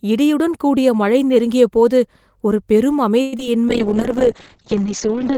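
A speech recording with two network-call faults near its end. From 3.21 to 3.47 s there is repeated packet loss (robotic sound). Four holes open in quick succession, the longest about 112 ms. Each is bridged by stretching the preceding sound, so more than half of that quarter-second is synthetic fill, with some of it simply missing. It sounds choppy. On a spectrogram the stretch shows smeared, repeating harmonic bands broken by short dropouts, and the waveform shows flat or cloned segments. Then from 3.69 s to the end a call bitrate drop sets in. The coarser coding points to the encoder falling from around 32 kbps to roughly 6 kbps. The speech turns rough and watery and loses its brightness because the audio bandwidth is cut from 20 kHz to 6 kHz. A spectrogram shows a sharp horizontal ceiling at 6 kHz with nothing above it, and blotchy, grainy texture below.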